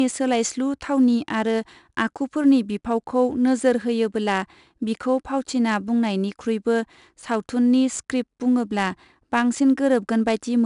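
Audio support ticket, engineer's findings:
4-bit ADPCM compression, throughout the speech. Gritty hiss riding every loud syllable, plainly audible, roughness on sharp onsets where the adaptive step lags. No content above 10.6 kHz, which fits a low sample rate near 22 kHz, around 89 kbps.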